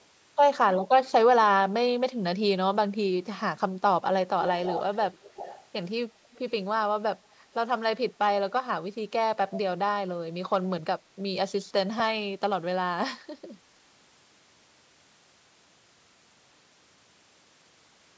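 Speech with three bursts of echo leak, at 4.41–4.96 s, 5.12–5.65 s and 6.24–6.51 s: a copy of the voice trailing 293 ms behind, first around 10 dB down, then roughly 15 dB, then barely audible. The likely cause is a far-end loudspeaker whose echo canceller let its microphone pickup through. On a spectrogram, which shows no energy above 8 kHz from the call's microphone processing, each burst appears as faint, shifted harmonic traces behind the originals.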